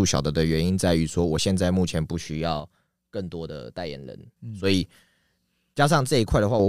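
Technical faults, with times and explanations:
2.6 to 4.37 s and 5.74 to 6.60 s, one channel drops out: the speech suddenly falls by about 6 dB, then jumps back. This is likely one stereo channel going silent, so the mono sum carries only half of the shared signal.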